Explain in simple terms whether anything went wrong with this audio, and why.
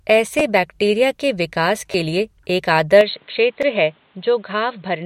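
Three times the recording system ran short of fresh audio and fell back on replaying what it already had, and once it appears to have swapped to a worse microphone.

The first problem is a repeated buffer. When new sound did not arrive in time, the device played its last tiny chunk of audio again, each chunk about 10.7 ms long, which fits a 512-sample buffer. This happens at 0.40 s, between 1.92 and 1.94 s (where the chunk repeats twice), and at 3.62 s. Each one is heard as a brief click or buzzy stutter, with a sliver of real sound lost.

The second problem is most likely an input switched to a poorer device. From 3.01 s to the end, the recording seems to have changed to a lower-quality microphone with no gap at the switch. After that point nothing above about 4.2 kHz gets through, so the speech turns dull and boxy. It also becomes somewhat quieter and carries new faint background noise.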